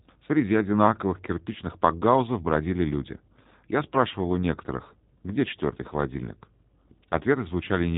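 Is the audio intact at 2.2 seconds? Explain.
No. At 2.2 s, as throughout the clip, the speech has passed through the G.729 codec, a low-rate scheme consistent with 8 kbit/s that rebuilds each 10 ms frame from a vocal tract filter, a pitch predictor and a few pulses. Nothing above 3.8 kHz survives, and the speech sounds plainly rough and synthetic.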